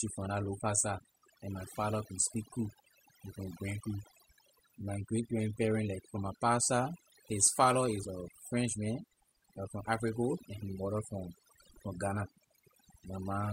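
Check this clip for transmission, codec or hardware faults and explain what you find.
One fault runs through the whole speech clip: overdone noise removal, from start to finish. A noise reducer was set far too aggressively, so any frequency band sitting close to its estimate of the background noise gets pulled down hard or cut out entirely, and the softer parts of the speech fall below that threshold along with the noise. The background becomes near silence dotted with twinkling, chirpy specks.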